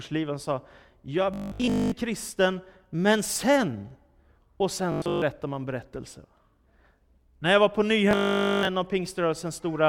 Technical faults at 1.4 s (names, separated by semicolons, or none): robotic sound from repeated short buffers